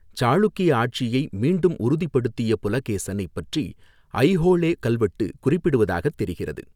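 No technical faults can be heard anywhere in the recording, and the signal holds steady throughout.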